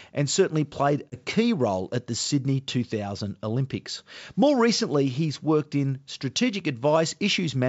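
Speech coded as G.722 wideband carries packet loss on an ADPCM call at 1.10–1.17 s, between "and certainly played" and "role at the". About 20 ms, likely one packet, drops to silence, a hard-edged gap in the waveform and a blank vertical stripe on a spectrogram. The decoder's predictor and step size then briefly misadapt before resettling.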